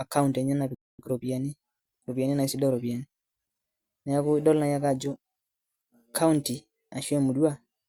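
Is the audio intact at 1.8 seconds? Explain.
No. At 1.8 s the speech is in a time-compressed catch-up from 0.99 to 3.39 s. Small cross-faded cuts speed it up 1.1 times at normal pitch.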